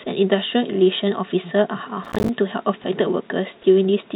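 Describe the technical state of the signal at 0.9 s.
At 0.9 s the speech is intact, with no fault at that moment beyond the narrowband character of the call path, which carries nothing above 4 kHz.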